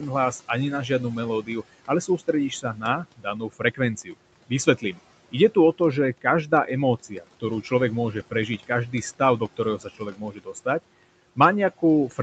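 Noise suppressor artifacts run through the whole recording. The suppressor pulls the steady room noise down by about 18 dB frame by frame, so the background drops away between phrases and comes back up under the speech.

From 0.88 s to 10.66 s, starting just after "hlas ani na", there is speech cut by the noise suppressor. It misreads quiet parts of the speech as noise and turns them down by as much as about 17 dB, for roughly one and a half seconds in total, so soft consonants and word endings sound swallowed. The same happens again from 11.36 s to the end, with dips of up to about 14 dB.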